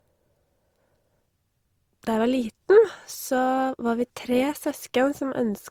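Throughout the speech, artefacts of an earlier low-bitrate encoding, consistent with Opus at around 32 kbit/s, persist inside what is likely a 256 kbit/s MP3 re-encode. This is low-bitrate audio saved at a high bitrate. A spectrogram shows energy ending near 20.2 kHz.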